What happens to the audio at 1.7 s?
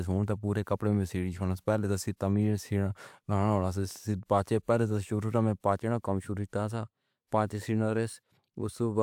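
Nothing goes wrong at 1.7 s; the speech there plays through cleanly, with no dropout, click, distortion or other fault.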